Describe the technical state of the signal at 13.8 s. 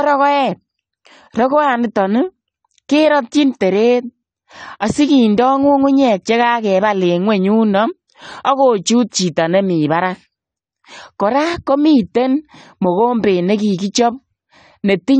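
At 13.8 s the speech sounds dull and smeared, with a warbling, fizzy edge on sustained sounds and sibilants, and nothing comes through above 9 kHz. This runs through the whole clip and is plainly audible. The likely cause is AAC compression at a low bitrate, which fits roughly 32 kbps AAC-LC. That starved the encoder, so it lowered its cut-off and quantised the remaining spectrum coarsely, leaving holes and noise-like texture.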